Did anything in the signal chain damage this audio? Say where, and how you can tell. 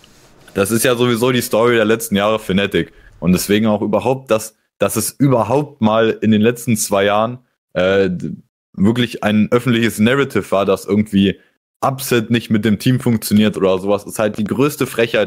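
Yes. From 13.00 s to 15.18 s a train of clicks, about ten similar pulses at an uneven five per second and roughly as loud as the speech, ticks over the sound and gaps alike, likely interference picked up in the analogue wiring.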